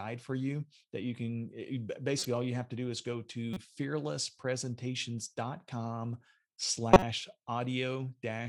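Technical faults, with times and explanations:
2.19–2.26 s, 3.54–3.57 s, 6.92–7.03 s: corrupt frame decoded. Damaged compressed frames were played anyway, so misread codes put energy at the wrong frequencies. Each is heard as a brief chirp or noise burst lasting a few frames. The loudest is the last, peaking near -10 dBFS.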